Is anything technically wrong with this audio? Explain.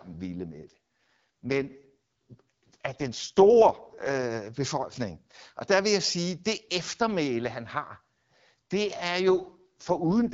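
Yes. The speech has two AMR rate drops, from 0.5 to 4.24 s and from 9.28 s to the end of the clip. In those stretches the AMR wideband (HD Voice) codec appears to step down from about 12.65 to 6.6 kbit/s, spending bits on error protection over a weak radio link. The voice turns rough and synthetic with no dropout. On a spectrogram the band edge stays put, but harmonics smear into grainy texture. The waveform stays continuous.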